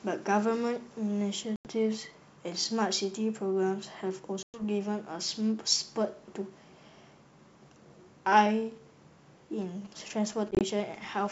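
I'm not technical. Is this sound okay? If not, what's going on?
No. There are two problems. The first is packet loss on an ADPCM call. Chunks of the speech drop out as abrupt silent gaps at 1.56 to 1.68 s (about 90 ms missing), at 4.43 to 4.62 s (about 110 ms), and as several tiny gaps scattered across 10.51 to 10.63 s. After each gap the speech returns with a click, a roughness or the wrong loudness, because the receiving end has to catch up with the sender. Unlike an ordinary dropout, the damage continues briefly after the sound resumes.

The second is GSM signalling bursts, from about 9.62 s to 11.27 s, just before the end. A nearby mobile phone talking to its network is being picked up by the audio equipment. It comes through as a quiet, galloping dit-dit-dit of short buzzes at about 217 Hz. Unlike mains hum, it stutters in bursts instead of droning steadily.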